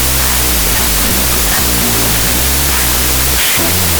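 Speech clip, and it's wrecked from start to finish by a wrong sample width. What you hear is a loud wash of harsh noise with the talking buried underneath, dragging along at half speed, so everything sits an octave low. That fits 32-bit float data being read back as 16-bit integers: each float gets split into two bogus samples, which halves the playback rate. Most of those values are mismatched bytes, and only the halves carrying the float's top bits keep a rough trace of the real waveform.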